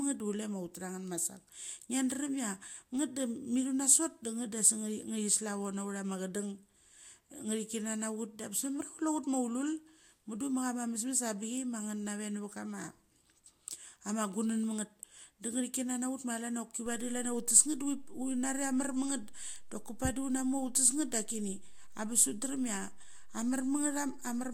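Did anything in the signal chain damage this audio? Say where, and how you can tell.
Yes. A DC step damages the speech at 16.86 s. It sits at the converter or analogue front end. The waveform's zero line jumps to a new level at that moment. The jump is heard as a low thump or click. The speech carries on unchanged through it. The offset then persists until the clip ends at 24.54 s. This points to a converter shifting its reference, or an input carrying an offset being switched in.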